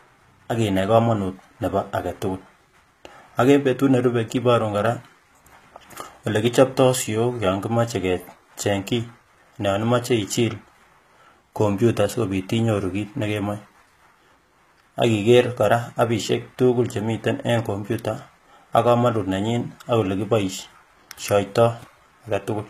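Speech with HE-AAC compression throughout: treble up to 14.9 kHz sounds bright but gritty and lispy, likely rebuilt by band replication at roughly 20 kbps, not merely dulled by low-pass filtering.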